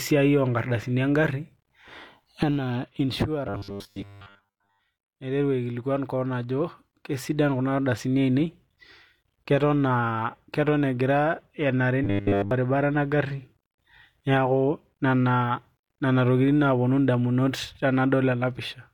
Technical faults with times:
3.47-4.82 robotic sound from repeated short buffers
12.04-12.51 robotic sound from repeated short buffers

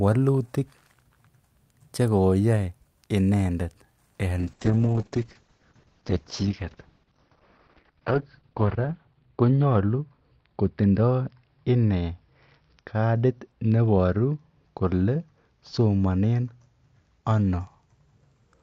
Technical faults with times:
4.41-18.62 call bitrate drop

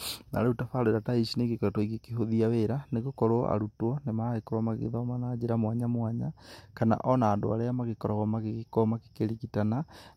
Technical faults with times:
none

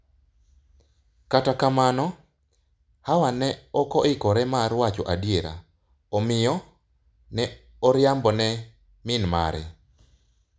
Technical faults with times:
none

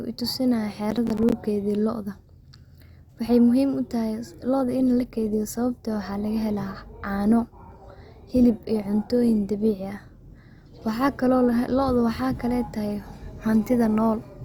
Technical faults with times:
0.91-1.32 processor overload crackle
4.44-14.45 adaptive stream at a lower bitrate

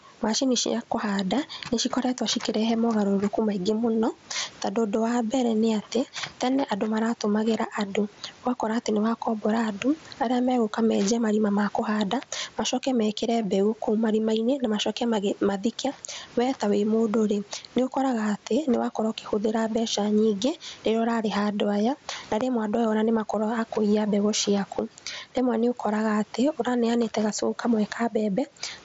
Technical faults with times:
0.00-28.85 gain pumping

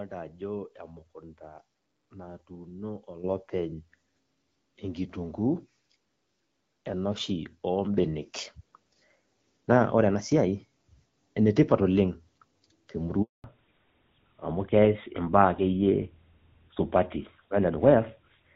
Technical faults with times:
3.24 microphone volume stepped up
7.98 microphone volume stepped up
13.22-13.44 handover gap
13.44-18.55 fallback to narrowband

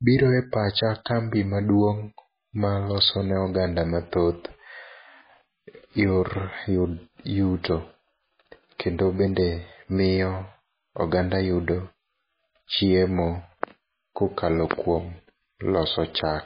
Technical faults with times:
0.00-16.46 MP3 compression

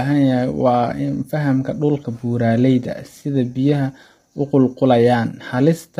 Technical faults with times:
0.00-6.00 low-delay AAC compression

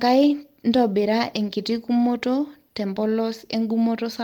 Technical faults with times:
none

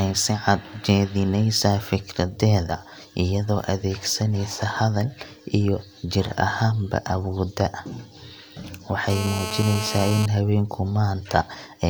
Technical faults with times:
9.10-10.26 GSM phone buzz

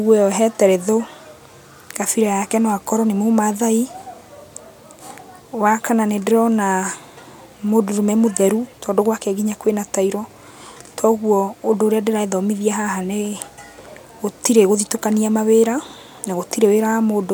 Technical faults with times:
none

